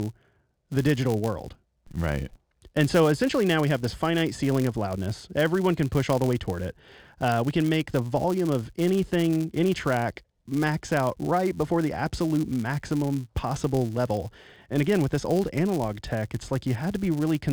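A speech recording with a filter restarted on every block running through the whole clip: the filter loses its memory at each block edge and restarts from silence, putting a small transient at every boundary. The result is a buzz at about 172 Hz, which fits a 256-sample block, that rises and falls with the speech level. A spectrogram shows a comb of harmonics at multiples of 172 Hz, and the waveform shows regular small steps roughly every 5.8 ms.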